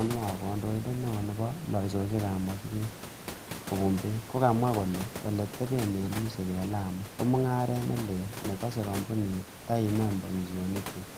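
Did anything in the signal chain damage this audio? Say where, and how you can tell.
No, nothing in the chain has damaged this speech recording; the only thing beneath it is the room's own background noise, sitting about 15 dB below the speech and captured along with it at the microphone.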